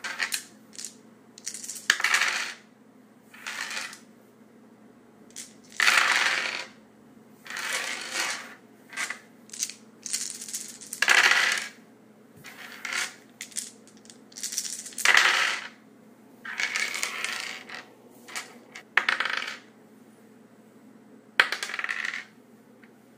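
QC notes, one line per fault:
Nothing here to flag; I listened all the way through these sounds and didn't catch a single problem worth noting.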